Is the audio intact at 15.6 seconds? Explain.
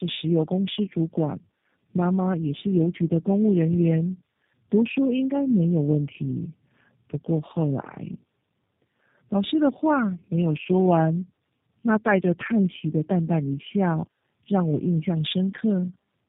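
No, it's tandem speech coding for the whole clip: repeated low-rate coding, pointing to three G.729A-style stages, leaves the speech rough, warbly and muffled, with nothing above 3.8 kHz.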